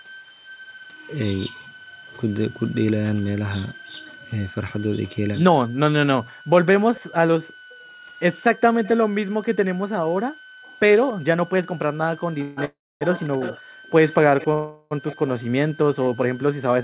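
Right from the start and all the way through there's a switching supply whistle, a thin high tone around 1.5 kHz that wanders between about 1.45 and 1.59 kHz. It sits roughly 25 dB under the speech.

Also running the whole length is a faint delayed copy of the speech, arriving about 284 ms behind and something like 20 dB down. That's most likely an echo leak: the far end's loudspeaker bled into its microphone and the echo canceller didn't catch all of it.

From 7.07 s to 16.48 s the background gets gated by the echo canceller. The room tone ducks out in short bursts adding up to roughly a second, dropping by as much as about 40 dB before springing back once the canceller releases.

Between 9.69 and 9.73 s the speech itself gets clipped for a moment, sinking by something like 30 dB for about 40 ms. The likely cause is speech suppressed in double talk, with the canceller clamping down because both ends were active together.

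Then come three call audio freezes, each likely from packets arriving late and the jitter buffer running dry. From 12.42 to 12.59 s there's a 148 ms fill. From 12.65 to 13.03 s there's a 360 ms fill that fades to about 260 ms of silence. From 14.53 to 14.93 s there's a 382 ms fill. Each one smears the last sound into a fading buzz or hiss, then picks up exactly where it left off, so nothing's missing, just pushed later.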